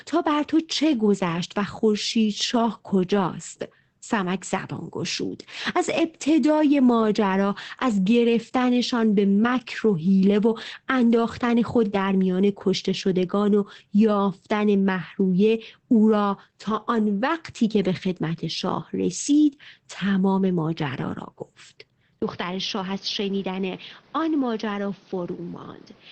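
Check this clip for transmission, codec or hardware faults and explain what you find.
Two faults are audible: codec damage across the whole clip, and an abrupt change of pickup near the end.

The speech sounds muffled, slightly hoarse and faintly robotic from start to finish, with nothing above 8.5 kHz. This is Opus voice compression in its SILK wideband mode, coding the excitation coarsely at a low bitrate, which fits roughly 12 kbps in 20 ms frames.

At 22.20 s there is a 20 ms dropout. From there to the end the sound turns duller and boxier, cut off above 6.4 kHz, a few decibels quieter, with a faint new noise floor. This is likely an input switched to a poorer device.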